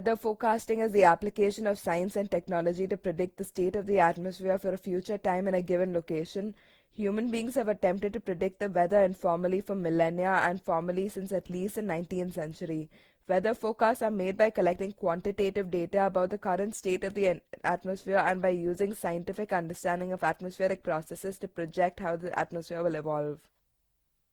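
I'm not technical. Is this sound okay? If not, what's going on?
No. Throughout the whole clip the speech sounds swirly, smeared and hollow, and the starts of sounds are blurred rather than crisp. This is generation loss, likely caused by the recording being saved in a compressed format, reopened and saved again, roughly ten times over. Each save throws away a little more detail in slightly different places, so the damage piles up.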